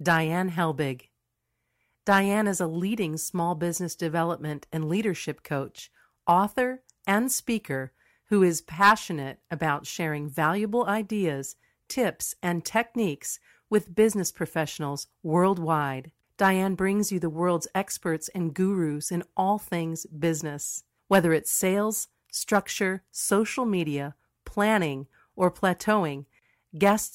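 No technical faults can be heard anywhere in the speech.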